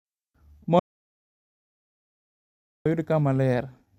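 An audio dropout to silence runs from 0.79 s to 2.86 s in this speech clip, wiping out about 2.06 s of the talker mid-flow. The speech stops abruptly and restarts just as suddenly, and the gap between is dead silence with no room tone at all. That clean silence points to the input signal likely being lost, through a disconnected device, broken link or stray mute, while recording carried on writing empty samples.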